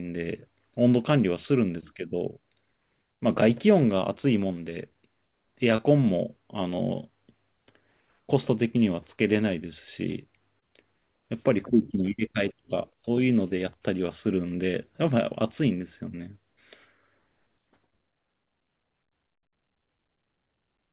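A speech recording carries two instances of short concealed packet loss, at 5.76 to 5.80 s and 10.60 to 10.64 s, each a gap of about 20 ms. The receiver covered each hole by extending the preceding sound and crossfading back into real audio, so what you hear is a brief smear or wobble rather than silence. That sets it apart from a plain dropout or click, which leaves a hard gap or spike. The narrowband call path, with nothing above 4 kHz, fits G.711.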